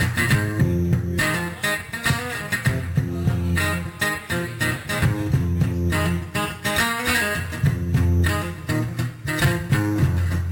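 Imaging from sample-and-hold upsampling runs throughout. Samples were repeated unfiltered from 12 kHz to 48 kHz. Mirrored copies fill 6 to 12 kHz as metallic fizz, about 17 dB down.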